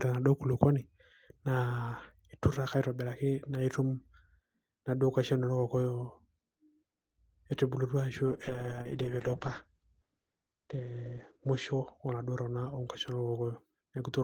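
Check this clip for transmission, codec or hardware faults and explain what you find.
One transmission fault is present. A call bitrate drop runs from 8.27 to 12.57 s: the bandwidth estimate fell, so the encoder coded the speech with far fewer bits, which fits a fall from 32 to 11 kbps, and it narrowed the audio band from 20 kHz to 8 kHz. For about 2.99 s at its lowest, the speech sounds muffled and rough, with a watery texture, until quality returns.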